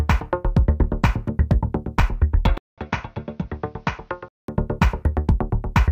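At 2.58 s the audio cuts to silence for 200 ms, then returns duller and boxier, about 10 dB quieter, with a faint new background noise roughly 40 dB under the signal. This band-limited stretch runs to 4.48 s, where the fuller sound returns. The likely cause is the input switched to a poorer device. On a spectrogram, everything above 6.7 kHz vanishes during that span, and the waveform shows a short gap, then a shrunken envelope.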